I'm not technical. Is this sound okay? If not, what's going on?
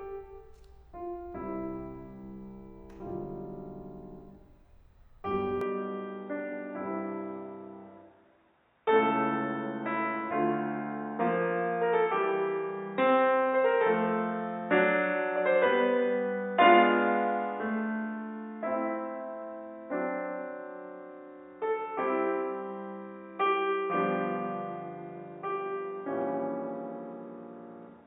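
No. From 5.61 s the music suddenly turns dull and boxy, with nothing above 3.8 kHz. This is likely an input switched to a poorer device.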